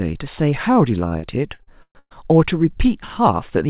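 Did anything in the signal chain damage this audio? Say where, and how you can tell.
Yes, at the network stage: repeated packet loss (robotic sound) from 1.08 to 2.14 s, six holes (longest 124 ms) patched by stretching prior sound. Recurring choppy gaps, unlike one isolated dropout.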